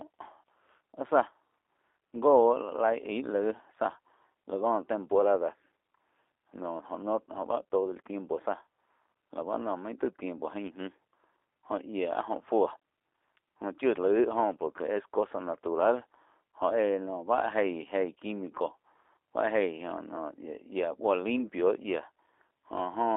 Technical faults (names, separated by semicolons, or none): G.729 codec